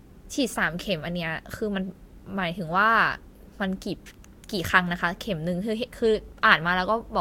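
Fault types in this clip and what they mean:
No faults can be heard.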